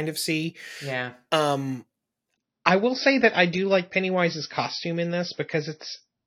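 At 2.33 s, after "of see yeah um", the adaptive stream drops to a lower bitrate with no gap. The treble is cut off sharply at 6.5 kHz, a flat ceiling on the spectrogram through to the end.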